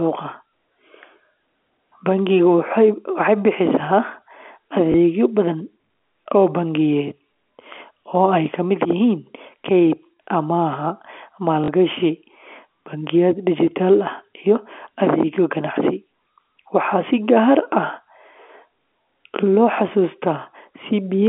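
Packet loss with last packet repeated hits at 4.92 to 4.94 s and 11.64 to 11.68 s. Repeated 20 ms chunks fill each gap, and the second one buzzes briefly.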